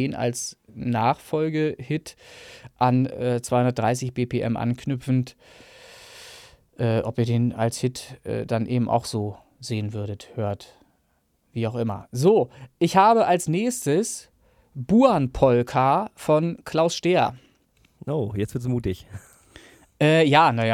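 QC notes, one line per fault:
No fault to note.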